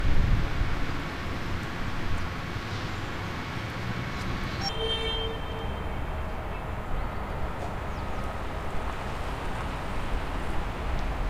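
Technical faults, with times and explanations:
0.00–4.69 s, section at the wrong speed: the opening sounds hurried and shrill, roughly ten semitones high, then snaps to natural pitch and pace at 4.69 s. It plays 1.76 times too fast, likely timed against the wrong clock, so pitch and tempo rise together.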